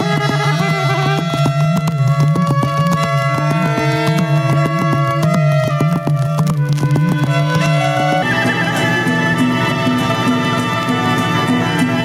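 The audio shows gain pumping from start to finish. The swing is large, around 10 dB. Loud and quiet passages sit unnaturally close in level, so the sound is squashed. The likely cause is input gain set far too high, with a fast limiter or compressor clamping down on each peak and releasing between them.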